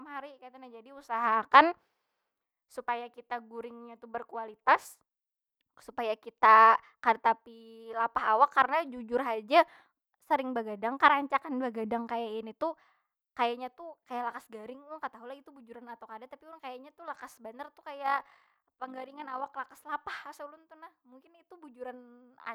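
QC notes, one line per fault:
18.06–19.50 s: overlap-add ripple. The speech takes on a rough, robotic flutter as its level swings by about 6 dB roughly fifty times a second. Windowed frames were rejoined with an overlap that fails to sum to constant gain, so loudness dips and recovers once per frame.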